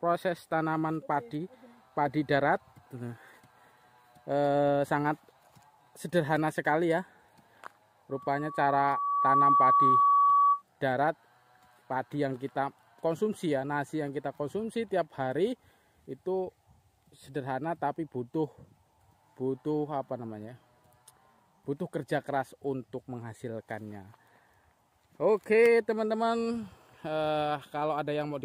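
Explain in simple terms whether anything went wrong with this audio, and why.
From 8.1 to 10.6 s there is loudspeaker feedback squeal: a microphone picked up its own loudspeaker, and a 1.1 kHz tone looped round and grew over about a second and a half into a piercing whistle, well above the rest of the sound.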